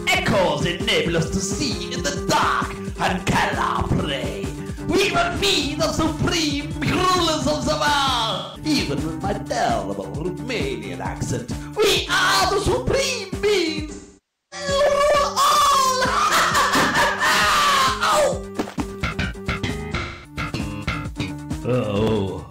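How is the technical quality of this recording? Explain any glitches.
Four short dropouts from AAC frame loss with concealment occur at 5.22–5.66 s, 8.33–8.65 s, 13.92–14.67 s and 20.0–20.4 s.

When AAC frames go missing, the decoder patches each gap from the last good spectrum. That leaves smeared, noisy or phasey patches in place of the real audio. The first event is scattered, with short gaps of about 40 ms at most, totalling about 171 ms. The longest, at 13.92 s, covers about 600 ms and fits roughly fourteen lost frames.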